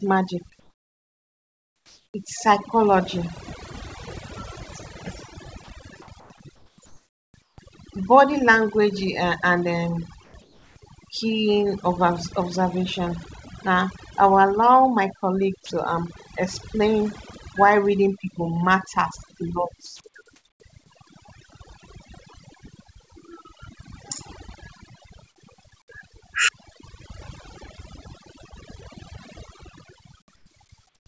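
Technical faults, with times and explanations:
Throughout: overdone noise removal. The noise reduction on this speech is set too hard, pulling individual frequency bands down whenever they sit near its noise estimate. Quiet parts of the voice vanish with the hiss, and the background drops and breaks up into twinkling specks.
0.60–2.14 s, 10.24–10.76 s (between "and um" and "keen of"), 19.86–20.60 s, 30.36–31.06 s: comfort noise in place of the background. In the pauses the real background gives way to a steady, featureless synthetic noise, about 4 dB quieter in the first gap. This is likely discontinuous transmission, with the receiver filling silence it was not sent.
2.12 s: onset clipped by the voice detector. The speech begins abruptly, its first 20 ms missing and covered by comfort noise, so the soft start of the sound is lost. The likely cause is a voice detector slow to notice that speech had resumed.
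5.64–7.58 s: sound chopped by the voice detector. Over this stretch about 1.06 s of material is replaced in pieces by comfort noise, so quiet syllables and word edges drop out. This is likely a detector switching transmission on and off repeatedly.
15.66 s (just after "my colleague") and 19.86–20.00 s: sound dropped by the voice detector. Brief stretches of quiet speech, 40 ms and then 60 ms, give way to steady noise before the voice returns. This is likely the detector mistaking low-level speech for background and pausing transmission.
The G.722 call path band-limits the audio, with nothing above 8 kHz.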